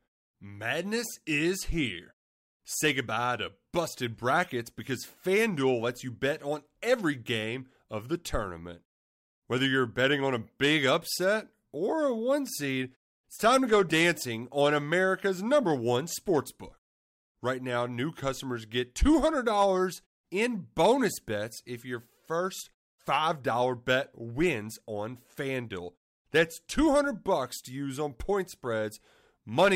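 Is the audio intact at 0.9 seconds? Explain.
Yes, the audio is intact at 0.9 seconds, with no fault at that moment.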